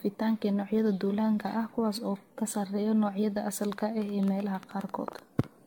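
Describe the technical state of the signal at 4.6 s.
At 4.6 s, a train of clicks runs from 3.65 to 5.45 s. It has about 8.4 pulses per second at uneven spacing, peaking around 10 dB above the sound. Likely cause: interference or a faulty connection.

Generation loss is present throughout. The sound is swirly, hollow and smeared, with nothing above 17 kHz. It fits many repeated lossy AAC re-encodes near 96 kbit/s, each adding fresh quantisation damage.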